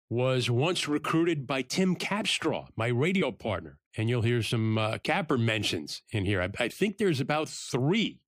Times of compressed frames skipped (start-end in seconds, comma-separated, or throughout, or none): 3.21, 4.51